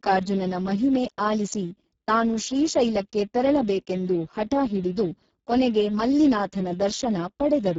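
The recording is speech, and the Speex codec damages it throughout. The voice sounds hoarse and noisy. The excitation is starved, which points to a very low bitrate near 6 kbps. Nothing reaches above 7.7 kHz.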